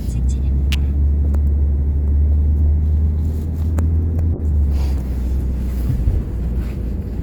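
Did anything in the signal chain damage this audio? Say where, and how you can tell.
Yes. At 0.72 to 0.74 s there is a sharp snap added over the sound, an electrical switching spike, likely a nearby switch or discharge arcing into the analogue wiring. On a waveform it is a narrow burst of spikes; on a spectrogram, a thin vertical stripe across all frequencies.

From 4.35 to 6.95 s a call bitrate drop takes the codec from 128 to 22 kbps, staying at the bottom for about 2.5 s. The sound turns rough, watery and muffled. A spectrogram shows the upper band going empty or smeared into coarse blocks until the bitrate recovers.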